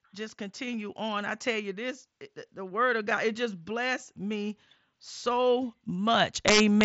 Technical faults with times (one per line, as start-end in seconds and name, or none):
6.48-6.85 integer overflow